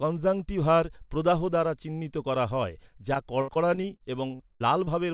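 From 3.14 s to 4.89 s, just after "দ্বারা চিহ্নিত করা হয়", the call suffers repeated packet loss, producing a robotic sound. Packets keep arriving late or not at all, and each hole is papered over by stretching the previous sound. About nine such gaps fall in this span, the longest around 65 ms, with roughly a sixth of the stretch concealed. The speech turns choppy and robotic, still band-limited below 4 kHz by the telephone-style codec.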